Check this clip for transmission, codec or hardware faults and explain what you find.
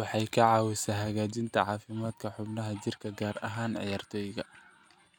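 Nothing in the speech points to a transmission, codec or hardware fault.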